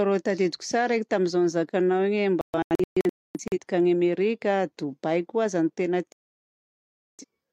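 At 2.41 s the speech breaks into a digital broadcast dropout: the receiver stopped getting clean frames and muted, so the audio falls into several short holes scattered through 3.58 s, about 0.73 s lost in all, the longest 0.26 s. A second dropout mutes 6.12 to 7.25 s, about 1.07 s gone. A waveform shows flat silent stretches, and a spectrogram shows blank vertical bands.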